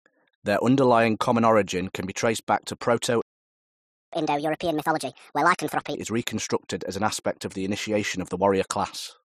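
At 3.22 s, right after "be traced back to", the speech cuts out. Silence holds until 4.13 s, a gap of about 0.91 s. This is a playback stall. The output simply stops mid-flow. The player likely ran out of data, or its thread was blocked. Nothing is heard until it recovers.

From 4.13 s the sound returns in a catch-up at higher speed. The player works through its backlog by resampling. Speech runs at 1.5 times normal speed. Pitch rises by roughly seven semitones, giving a hurried, chipmunk-like quality. This lasts about 1.8 s. At 5.95 s speed and pitch return to normal, just before "is reconstructed as an".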